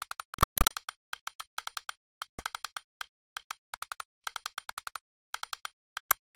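A recording of sound hit by what is likely a Bluetooth dropout, where audio packets reached the headphones too late and were discarded. Each loss cuts the output to silence, and the sound returns further along, as if it had kept playing. From 0.34 to 0.74 s about 266 ms vanish in several gaps, the longest 126 ms. Further losses of 98 ms and 112 ms follow at 2.29 to 2.43 s and 5.98 to 6.16 s.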